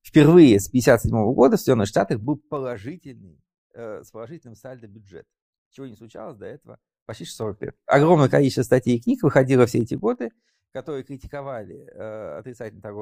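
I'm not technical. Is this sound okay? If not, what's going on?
No. Zipper noise at 1.84–3.0 s, 6.72–7.84 s (after "чего не случалось до") and 9.72–10.76 s (after "статей и книг выходило"): the volume changes in small jumps rather than smoothly, and each jump ticks.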